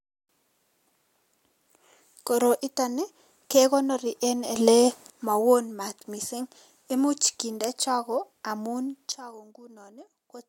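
Speech with two sudden gain jumps. At 4.56 s the level steps up by about 10 dB, speech and background noise together, and holds until 5.10 s, where it drops back. From 9.12 s to the end the level falls by about 14 dB. Each change happens between adjacent samples with no ramp, likely a digital gain setting or bit shift applied instantly rather than faded in.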